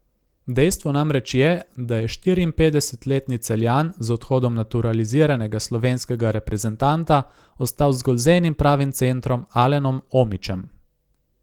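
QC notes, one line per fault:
No faults to log for this speech clip. The Opus voice compression runs in hybrid mode at 24 kbps with a fullband range reaching about 20.3 kHz, and its coding damage is light.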